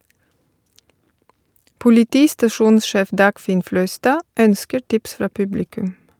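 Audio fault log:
No technical fault can be heard anywhere in the speech recording, which keeps a steady, continuous signal throughout.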